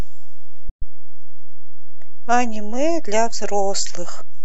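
A DC offset runs through the whole speech clip: the waveform sits shifted away from zero by a constant amount. You cannot hear it as a tone or hum, which separates it from mains hum at 50 or 60 Hz. It shows only as steady energy at 0 Hz and as lost headroom on one side of the waveform. It can also cause a click wherever the audio is cut or started abruptly.

At 0.69 s the audio goes silent until 0.83 s. This is a digital broadcast dropout: the receiver stopped getting decodable frames and muted rather than play corrupt data. About 120 ms of programme is lost, which fits roughly five lost frames. An 8 ms fade softens the mute's edges. Unlike an analogue fade or hiss-filled signal loss, the gap is clean silence, and the sound resumes later in the programme instead of picking up where it stopped.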